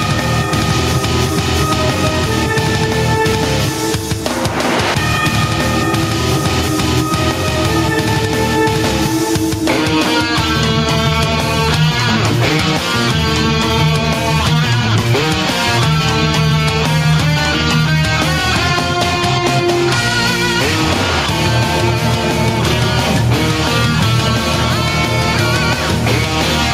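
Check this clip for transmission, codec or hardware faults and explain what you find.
Gain pumping runs through the whole clip: the level ducks by roughly 5 dB under every loud sound, then recovers. The likely cause is input gain set far too high, with a fast limiter pulling it down. Unlike a noise gate, the level is ridden down and back up rather than cut off.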